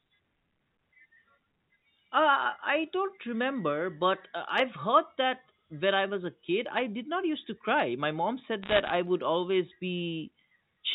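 From about 8.62 to 8.90 s, right before "would always", there's a burst of bit errors on a digital phone line. Flipped bits, somewhere under one percent, corrupt single samples of the G.711 stream, so you get sharp ticks and crackle sitting over the speech.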